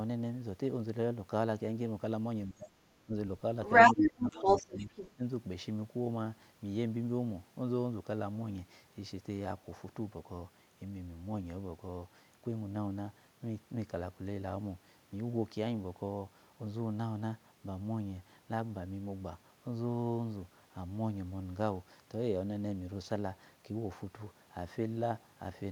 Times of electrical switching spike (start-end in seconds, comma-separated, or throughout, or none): none